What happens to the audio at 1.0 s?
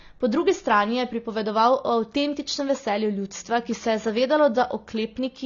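At 1.0 s the speech carries AAC compression, present throughout the clip, likely from low-bitrate AAC-LC coding. Nothing reaches above 7 kHz, so the speech sounds dull and smeared. The coarsely quantised spectrum gives sibilants a plainly audible warbling, fizzy texture, which fits roughly 24 kbps.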